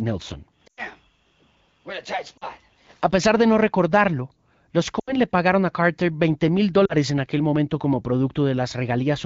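Lost AMR speech frames occur at 0.67–0.82, 2.38–2.45, 4.99–5.17 and 6.86–6.94 s. The decoder smears pitch and formants forward with falling gain. Each gap drops to near silence within two frames, and shows as a blurred, fading spectrogram patch and shrinking waveform envelope.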